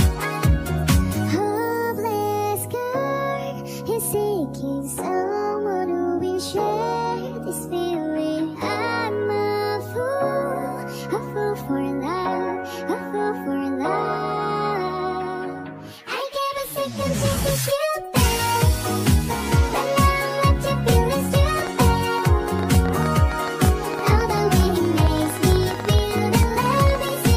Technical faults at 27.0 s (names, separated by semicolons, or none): train of clicks